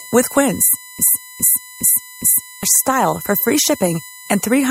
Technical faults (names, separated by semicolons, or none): USB whine; broken-record loop